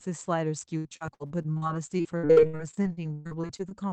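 Speech with repeated packet loss (robotic sound) from 0.77 to 3.73 s: about thirty dropouts, up to 122 ms each, patched by extending prior sound, making it choppy and robotic.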